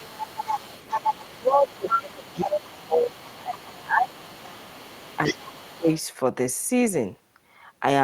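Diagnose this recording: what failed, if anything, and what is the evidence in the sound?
Speech suppressed in double talk, at the call-processing stage: the speech dips by as much as about 20 dB from 0.0 to 0.18 s, for most of 1.38 to 4.43 s, and again from 5.3 to 5.9 s. Each dip coincides with a second voice being present, which likely means the echo canceller's double-talk handling attenuated the near talker along with the echo. The dips follow the overlap, so they point away from network packet loss.

The other side's voice leaking through, also in call processing: a second voice sits about 10 dB below the main speech from 0.08 to 3.87 s, then fainter, about 25 dB down, from 4.04 to 5.99 s. This is likely residual loudspeaker echo that the canceller failed to remove from the microphone signal. It overlaps the suppression windows, and the stronger leak early on matches the longest dip. 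That overlap separates it from simple crosstalk or room bleed, which would not cause the main speech to duck.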